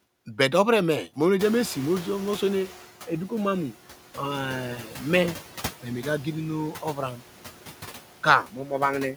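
Noise suppressor artifacts run through the whole clip. The suppressor pulls down the bands it judges to be steady noise, frame by frame, by about 11 dB. The background sinks in the gaps between words and comes back up underneath them.

At 1.39 s comes the noise suppressor catching up. Around one and a half seconds in, the room noise jumps by roughly 20 dB, settling somewhere near 17 dB below the speech. The suppressor's noise estimate lags behind that jump. For 1.47 s, until 2.86 s, the louder noise leaks through with less reduction, about 8 dB. Then it sinks as the estimate adapts to the new level.

Speech cut by the noise suppressor follows three times. It happens at 4.84 to 4.98 s, 6.72 to 6.98 s and 8.46 to 8.71 s. Each time, the suppressor mistakes part of the speech for noise and turns it down with the background. Around a tenth of a second is affected on each occasion. The drops deepen as the clip goes on: about 6 dB, then about 8 dB, then about 10 dB. 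Those stretches sound swallowed and faint.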